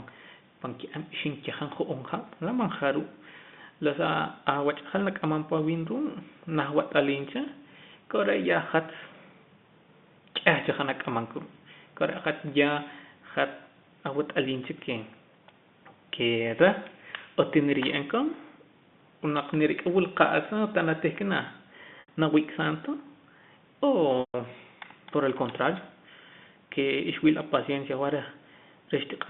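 At 22.0 s and again at 24.2 s the speech shows packet loss with pitch repetition. About 80 ms goes missing first, then about 140 ms, which fits runs of 20 ms packets. Instead of falling silent, the receiver loops the last pitch period, so the sound briefly holds on a buzzy, steady tone that fades before the speech cross-fades back. The longer gap decays into near-silence. This held buzz is what separates it from a plain dropout, which would simply cut to a hard gap. The telephone band from 150 Hz to 3.6 kHz can be heard throughout.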